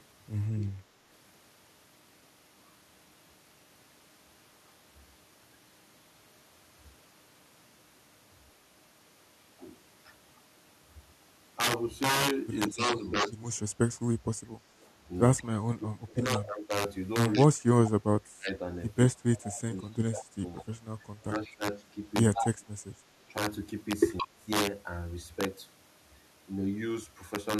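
Integer overflow runs through the whole speech clip: loud peaks pushed about 7 dB past full scale wrap to the opposite sign, giving harsh cracks far sharper than ordinary clipping.

From 12.69 to 24.48 s the talker keeps dipping, by as much as roughly 25 dB and for about four seconds in total, likely speech suppressed in double talk as the echo canceller ducks both sides.

Echo leak shows up from 14.81 to 20.62 s, then briefly at 22.34 and 24.17 s. It's a copy of the voice trailing by 170 ms, about 15 dB below the speech in the long stretch and loudest in that 22.34 s burst, only about 5 dB down. The likely cause is a far-end loudspeaker whose canceller let some pickup through.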